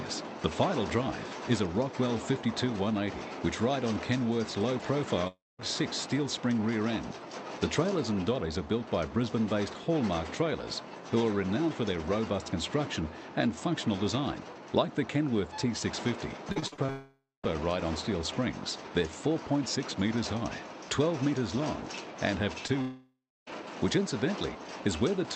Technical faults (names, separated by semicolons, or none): long network dropout; repeated packet loss (robotic sound); short concealed packet loss